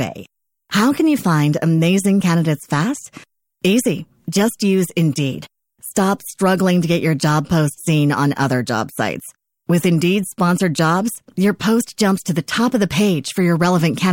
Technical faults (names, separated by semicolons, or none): pre-echo